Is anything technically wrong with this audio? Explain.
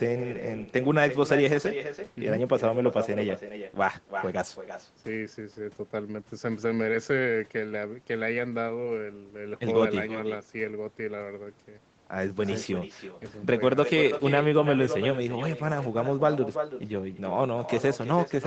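Yes. Throughout the speech there is echo with no canceller: the far end's loudspeaker feeds the call back into its microphone, and nothing subtracts it, so every phrase returns roughly a third of a second later, about 10 dB quieter, a thin shadow trailing the talker. The whole clip stops at 8 kHz, matching the bandwidth this Opus call was set to.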